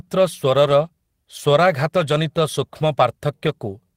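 Nothing in the speech stood out as a technical fault on listening.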